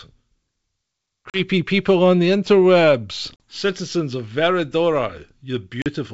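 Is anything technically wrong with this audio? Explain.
Yes. Packet loss on an ADPCM call shows up three times, at 1.30 s, 3.36 s and 5.82 s, in this G.722 wideband speech. Each time about 40 ms of audio drops to a hard-edged silence, which fits roughly two lost packets. Because ADPCM sends only differences, the decoder's predictor and step size lose track of the sender's. The speech therefore comes back at the wrong level or with a click and brief distortion, then settles within tens of milliseconds. A plain dropout would resume cleanly.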